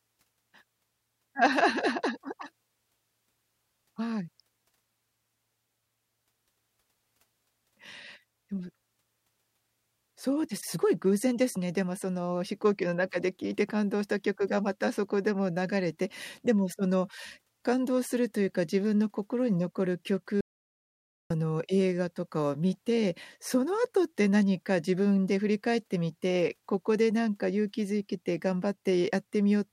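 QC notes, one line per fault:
20.41–21.30 s, audio dropout to silence: the speech cuts off mid-flow and the signal falls to silence for about 0.89 s, with no room tone underneath, before resuming abruptly. This points to the input being lost, likely a disconnect, link failure or stray mute, while recording continued.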